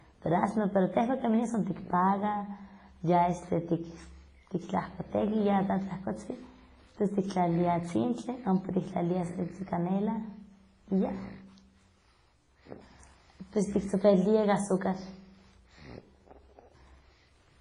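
Throughout the speech, the sound is washy and ringing, with hiss that swells and fades alongside the signal and nothing above 10.3 kHz. This heavy damage is likely WMA compression: long transform blocks smear quantisation noise in time, and weak components are discarded, which fits a bitrate near 24 kbps.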